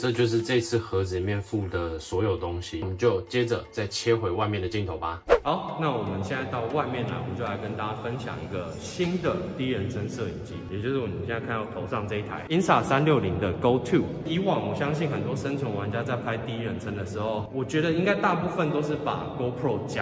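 No technical faults occur anywhere in the audio, so there is nothing to describe in time order.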